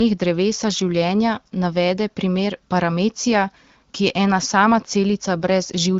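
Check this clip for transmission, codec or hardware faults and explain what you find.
Nothing wrong can be heard in the speech, which is carried through the AMR wideband (HD Voice) codec at 12.65 kbit/s, a rate at which the coding leaves only light traces and the speech stays clear.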